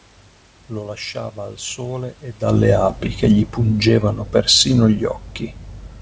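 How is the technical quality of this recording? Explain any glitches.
The recording has one glitch, an automatic gain falling, carried over a wideband call path whose sound stops at 8 kHz, which fits G.722 at 64 kbps. From 2.52 s, just after "lasciava al sole ed", until 5.23 s, the level sinks gradually by about 3 dB. The call's gain control judged the input too loud or its background noise too strong and eased its gain down over those seconds. The talker also shifts position near 2.5 s, but that movement changes only the voice level against a steady room background. The gain drop is different because the room noise sinks together with the voice, since the whole signal is being turned down.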